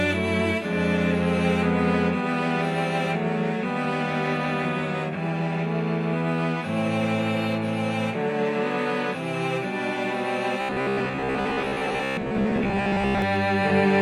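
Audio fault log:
10.61–13.22 s, robotic sound from repeated short buffers: 66.8 Hz buzz, likely from 15 ms chunks repeating over about half the audio; spectrogram shows evenly spaced harmonic stripes.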